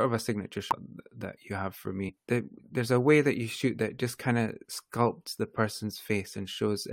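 Compressed frames skipped, at 0.71 s just after "of a signature" and again from 2.08 to 2.10 s after "you have for", interrupt this speech recording. At each point the decoder plays nothing for one or more whole frames, either because they were missing or because it rejected them as corrupt. The audio jumps forward by about a tenth of a second at the first spot and roughly 20 ms at the second.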